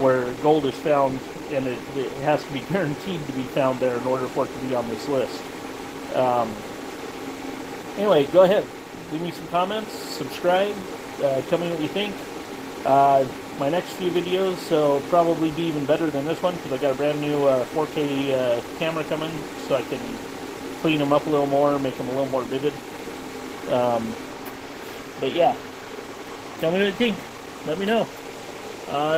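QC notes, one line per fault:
No technical faults detected.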